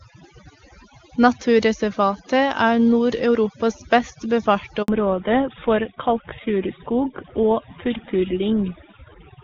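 Overdone noise removal runs through the whole of this speech recording. An overly aggressive noise reducer has driven individual frequency bands down to nearly nothing wherever they sat close to its noise estimate. The background drops and is dotted with twinkling specks, and quieter components of the voice were cut along with the noise. A handover gap opens at 4.82 s and lasts 60 ms, to 4.88 s. While the call was moved from one network to another, no speech frames came through. The voice fades out within a few tens of milliseconds and stays silent until the new link takes over, so whatever was spoken in that window is gone. Fallback to narrowband begins at 4.88 s and continues to the end. Before the switch, the wideband AMR-WB (HD Voice) coding is clean enough to fit a high rate, around 23.85 kbit/s. From 4.88 s onward, nothing above 4 kHz remains, and the voice turns duller and rougher. 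That band limit and added roughness point to the call dropping back to an older narrowband codec, most plausibly GSM full rate at 13 kbit/s.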